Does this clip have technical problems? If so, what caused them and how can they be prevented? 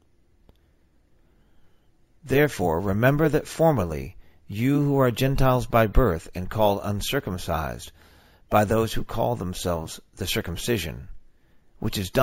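Yes. Throughout the clip there is imaging from sample-and-hold upsampling: a bright metallic fizz, about 21 dB below the sound, tracks its level. On a spectrogram, a mirrored copy fills 8 kHz to 16 kHz, which fits a 16 kHz source raised to 48 kHz by repeating samples. A zoomed waveform would show stair-steps. To prevent it, resample with a proper interpolating low-pass filter instead of sample repetition.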